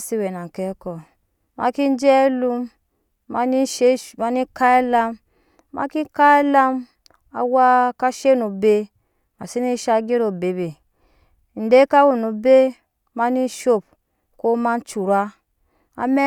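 A speech recording with nothing technically wrong with it.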